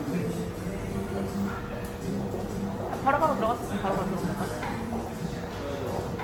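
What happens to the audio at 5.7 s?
At 5.7 s the sound carries generation loss, present across the whole clip: it is swirly, hollow and smeared, with blurred attacks, likely from about seven successive AAC passes each requantising on a shifted frame grid. A spectrogram shows nothing above 17 kHz.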